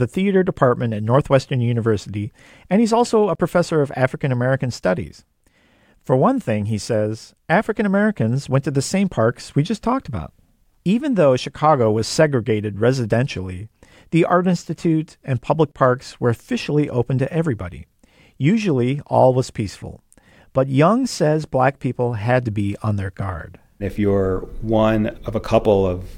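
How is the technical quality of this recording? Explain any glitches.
No glitches or technical faults can be heard anywhere.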